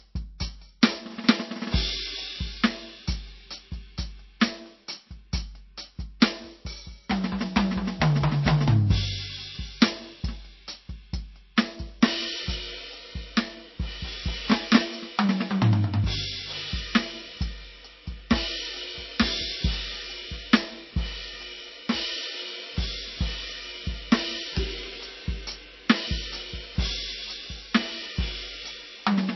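Throughout the music nothing sounds above 5.8 kHz, and swirly MP3 smearing remains. This is likely low-bitrate audio saved at a high bitrate, not a clean low-pass.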